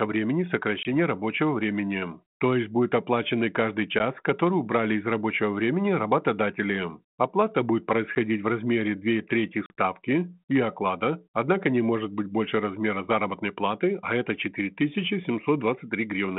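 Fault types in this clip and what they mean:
Packet loss on an ADPCM call: Four short holes of silence interrupt the speech, each losing roughly one to a few packets, about 10 to 40 ms of audio. Afterwards the decoder's prediction and step size mismatch the sender's. Speech returns slightly distorted, then settles.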